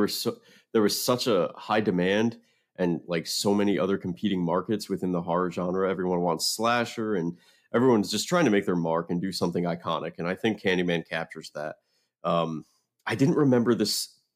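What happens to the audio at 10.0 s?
Nothing goes wrong at 10.0 s; the audio there runs on intact, with no dropout, click or other fault.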